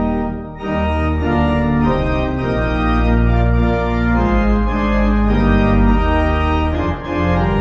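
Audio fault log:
No technical fault can be heard anywhere in the signal; the level, continuity and timing of the audio stay steady throughout.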